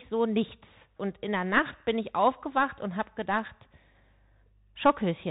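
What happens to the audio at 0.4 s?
At 0.4 s the speech is running through a Bluetooth CVSD headset codec, as it does for the whole clip. Each sample is coded as one up-or-down step of adaptive size, which fits a 64 kbps link. Nothing above 4 kHz survives. S sounds turn scratchy, and a granular hiss sits underneath.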